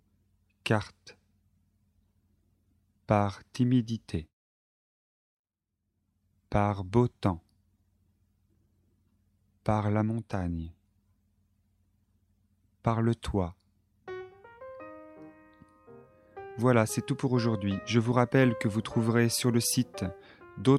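The signal carries through its whole duration without any audible technical fault.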